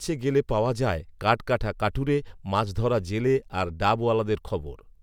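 No technical faults can be heard anywhere in the speech.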